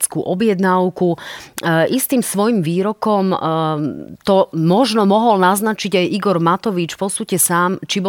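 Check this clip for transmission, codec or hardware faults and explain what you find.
Nothing stood out on listening to the speech here.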